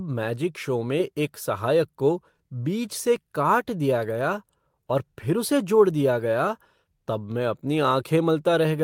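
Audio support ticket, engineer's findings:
No defects found on listening; the speech signal is intact throughout with no audible dropouts, distortion, noise, timing or level faults to attribute to any component.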